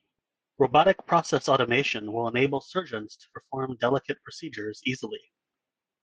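No technical faults are audible anywhere in this speech.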